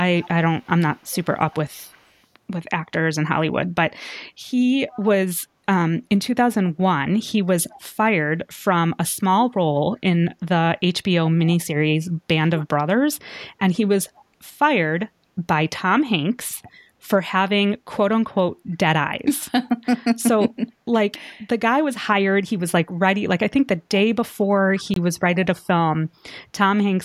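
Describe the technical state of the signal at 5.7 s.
Around 5.7 s the speech signal is intact, with no dropout, distortion, glitch or other fault audible at that point.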